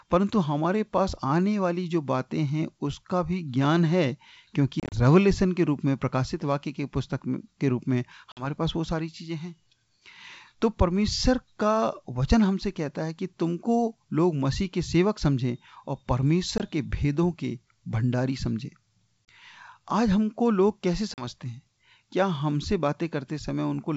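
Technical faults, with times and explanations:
4.80–4.97, 8.32–8.48, 16.58–16.61, 19.28, 21.14–21.27 s: packet loss on an ADPCM call. Lost packets leave abrupt silent gaps of 20 to 90 ms, the first scattered over about 120 ms. The G.722 decoder's predictor and step size then drift out of step, so speech resumes slightly distorted before settling.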